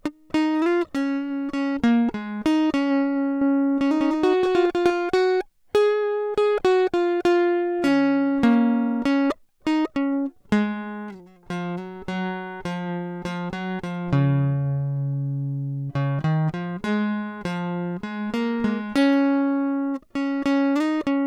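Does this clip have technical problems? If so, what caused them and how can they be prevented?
Yes. From 3.41 to 4.91 s the music has a doubled audio track: an equally loud, dry, full-band copy trails by roughly a fifth of a second and cuts in and out abruptly, likely from a slower second capture path. Route each source through one path only.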